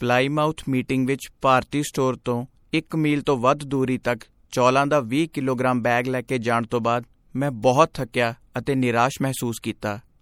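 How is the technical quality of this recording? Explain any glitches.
The recording carries plainly audible compression damage. Throughout, there's likely MP3 compression at work: the encoder, apparently starved of bits in a way that fits roughly 64 kbps, lets weak detail flicker, so the speech sounds watery and swirly with smeared edges.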